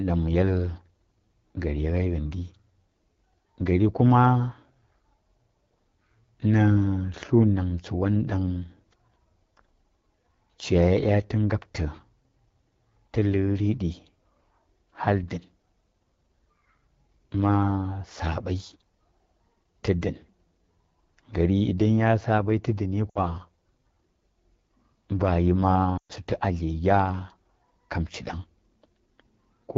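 Speech coded with the AMR wideband (HD Voice) codec sounds rough and raspy throughout, which fits its low 8.85 kbit/s mode; a spectrogram shows smeared harmonics and a noise-filled band from 6.4 to 7 kHz. Lost AMR speech frames, where the decoder smoothly fades out a repeat of the last good sound, hit at 23.09–23.18 s just after "tə dəni" and at 25.97–26.12 s just before "sutu a". These gaps fit about 60 and 120 ms of missing frames, and on the waveform they look like a quick decay into a flat gap.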